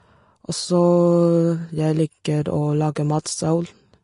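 Vorbis compression runs throughout the speech. Nothing is present above 10.5 kHz, and the remaining treble sounds hissy and grainy, with blurred attacks. The likely cause is a low-quality Vorbis encode, around 34 kbps, that quantised fine high-frequency detail into noise.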